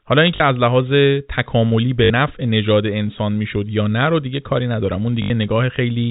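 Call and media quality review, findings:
Short robotic stutters at 0.36–0.40 s, 2.04–2.10 s and 5.22–5.30 s (40, 60, 80 ms): packet loss with last packet repeated, concealment replaying audio, which fits 20 ms packets. G.711 telephone coding band-limits everything to 4 kHz.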